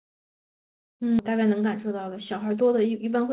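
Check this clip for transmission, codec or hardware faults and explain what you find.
Two transmission faults are present. The audio is band-limited, with nothing above 4 kHz, which fits a narrowband G.711-style call codec.

At 1.19 s there is a skip ahead. About half a second of audio was dropped while later audio was already queued, joining the two sides directly with no fill. The sound jumps abruptly forward. On a waveform there is a hard splice with no silence, and on a spectrogram a sudden discontinuity in the harmonic pattern.

From 1.28 s to 3.30 s there is a jitter buffer speed-up. To shrink an oversized buffer, the receiver repeatedly cut out pitch-period-sized pieces, removing roughly 150 ms in all. Playback runs at 108% speed at unchanged pitch and sounds hurried. A spectrogram shows compressed syllable durations with steady harmonic spacing.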